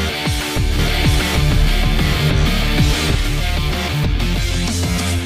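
The audio carries a doubled audio track from 0.79 s to 3.15 s: a second full-band copy runs roughly 0.7 s behind at about the same level, with no decay or room colour, and cuts in and out abruptly, likely from a slower second capture path.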